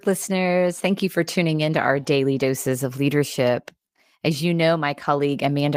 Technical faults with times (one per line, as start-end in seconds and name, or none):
none